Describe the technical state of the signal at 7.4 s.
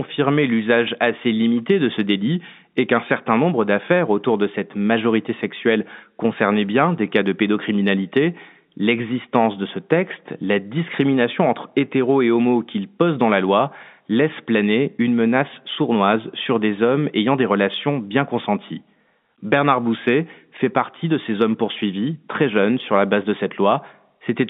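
At 7.4 s the signal is intact, with the speech carried through ordinary G.711 telephone coding in its usual narrow band and nothing going wrong at that moment.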